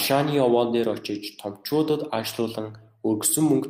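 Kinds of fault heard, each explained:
No kinds of fault are heard in this speech clip.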